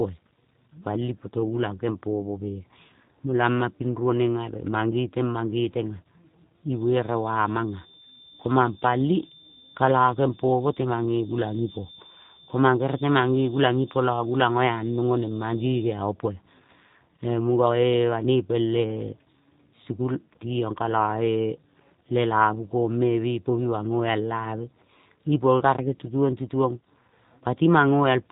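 The whole speech clip carries G.729 codec damage. The sound points to G.729A at 8 kbit/s. The codec rebuilds speech from a vocal tract model and a few pulses per frame. Nothing passes above 3.8 kHz. Speech sounds muffled, rough and plainly synthetic.

Hard clipping strikes twice. It occurs from 13.65 to 13.67 s, overdriven by about 3 dB, and from 25.66 to 25.69 s, by about 2 dB. The peaks exceed what the stage can pass and are cut flat. Each burst is a brief crackle.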